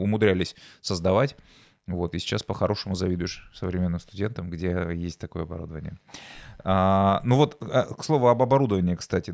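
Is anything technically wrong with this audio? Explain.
No, nothing is technically wrong with this audio.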